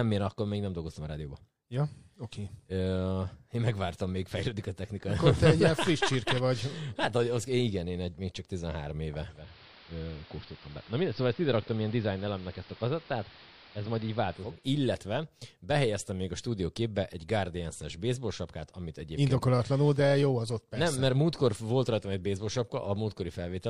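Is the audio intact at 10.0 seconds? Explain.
No. At 10.0 seconds the speech is inside a digital radio blend to analogue, running from 9.27 to 14.70 s. The receiver lost its digital stream and cross-faded over about 378 ms to the station's AM broadcast, then returned later. Across that span the treble is cut, so the speech turns dull and boxy, the level drops by about 3 dB, and a steady hiss sits roughly 20 dB beneath it.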